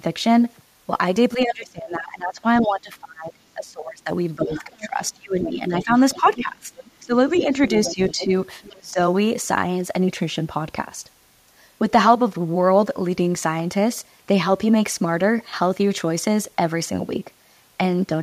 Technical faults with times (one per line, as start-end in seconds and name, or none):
1.36-8.98 speech suppressed in double talk
2.57-2.70 other side's voice leaking through
4.49-5.08 other side's voice leaking through
5.90-8.72 other side's voice leaking through